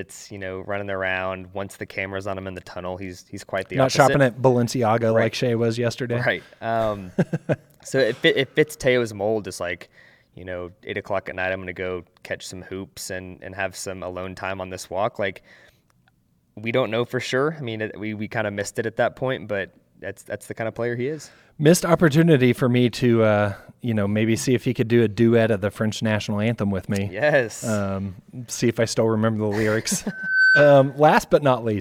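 At 30.08 s, right after "still remember the lyrics", a loudspeaker feedback squeal starts: a single 1.5 kHz tone swells over roughly a third of a second and holds until 31.04 s, ending up around 5 dB above the speech. The microphone was picking up its own loudspeaker, and at that frequency the loop gain went past one. A spectrogram shows one bright horizontal line at 1.5 kHz; the waveform's envelope grows into a dense, steady band.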